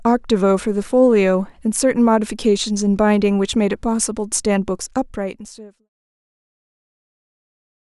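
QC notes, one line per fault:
Nothing to flag here; the speech simply eases out in a smooth editor's fade that begins around 4.5 s and settles to silence by 5.9 s, with no click or hard edge at the end.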